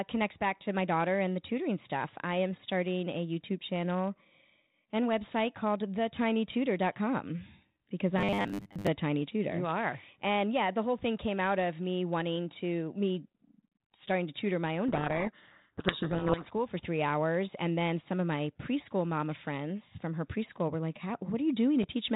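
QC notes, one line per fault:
8.19–8.88 s, robotic sound from repeated short buffers: before "tiny tutor" the speech becomes a rigid, metallic 100 Hz buzz. It is likely caused by audio arriving too seldom, so about 10 ms buffers were replayed over most of the stretch.
14.88–16.50 s, codec payload misread: between "to tutor my own" and "for three hours" the speech is buried in harsh distortion. The G.726 code words were read with their bit order reversed.
21.82 s, chunks out of order: a brief jumbled moment occurs where a 5.33 ms chunk played two chunks late, leaving hard joins around it.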